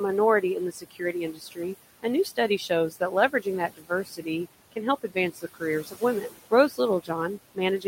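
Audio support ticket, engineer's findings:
Noise suppressor artifacts throughout: residual room noise pumps down between phrases and back up under speech. Frame-by-frame band gating on steady noise.

Speech cut by the noise suppressor from 0.41 s to end: parts of speech swallowed, dips of up to 18 dB. Suppressor misclassifying low-level speech as noise, attenuating it with background.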